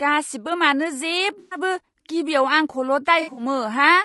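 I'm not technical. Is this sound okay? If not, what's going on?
No. The whole recording sounds rough and grainy, with a dull, slightly artificial top end. That fits low-delay AAC compression, likely the kind used for video calls. It is steady from start to finish, which sets it apart from the brief glitches below.

There are also two short damaged patches, from 1.39 to 1.58 s and from 3.21 to 3.43 s. This is AAC frame loss with concealment. Small pieces of the sound went missing, and the player filled each gap with a smeared, noisy guess. The second patch is a few scattered gaps, the longest well under a tenth of a second.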